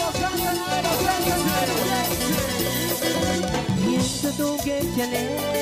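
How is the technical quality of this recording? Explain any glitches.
The recording has one clear fault: a doubled audio track from 0.84 s to 3.36 s. A second, equally loud copy trails about a second behind, most likely from a slower capture path or misaligned edit. It starts and stops abruptly, with no decay, and the spectrogram shows the same full-band pattern repeated one second later.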